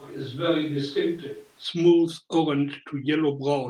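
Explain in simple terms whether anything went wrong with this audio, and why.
Switch to a distant microphone, from the start until 1.63 s: the speech sounds hollow, roomy, thinner and a bit quieter, with faint background noise, likely because a far-off microphone was recording.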